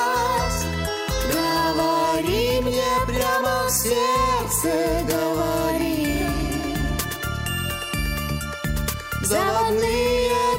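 No technical faults can be heard anywhere in the clip.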